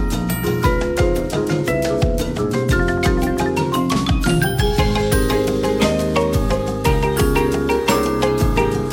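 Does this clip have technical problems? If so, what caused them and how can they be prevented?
No, there's nothing technically wrong to pick out here, so there's nothing that needs preventing.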